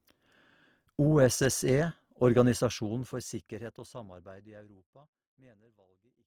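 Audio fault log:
throughout: Opus compression. The speech comes across grainy and plainly rough, with bands filled by noise rather than swirly gaps, while the top still reaches about 20.3 kHz. That fits Opus in music mode, likely running around 24 kbps.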